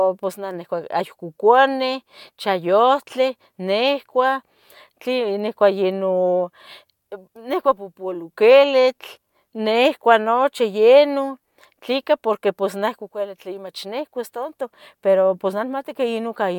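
A speech recording with nothing technically wrong with it.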